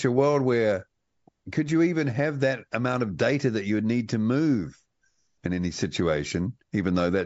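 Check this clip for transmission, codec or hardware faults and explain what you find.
Checking this clip turns up no faults to explain.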